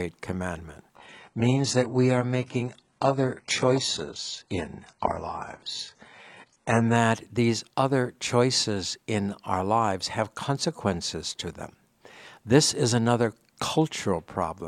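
From 0.96 s to 6.96 s the speech switches abruptly to an adaptive stream at a lower bitrate, then snaps back just before "these other choices in." Nothing reaches above 11.1 kHz, which points to a drop from AAC-LC at roughly 96 kbit/s to HE-AAC near 12 kbit/s. Unlike packet loss or a dropout, the sound never breaks off. Only the quality changes, suddenly and with no gap.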